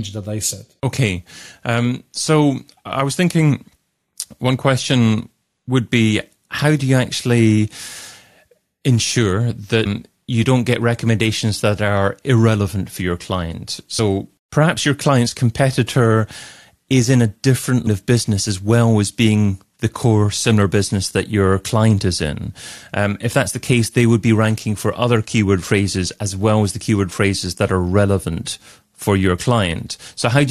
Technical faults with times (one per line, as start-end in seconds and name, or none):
9.85 damaged data in a compressed stream
13.98 damaged data in a compressed stream
17.86 damaged data in a compressed stream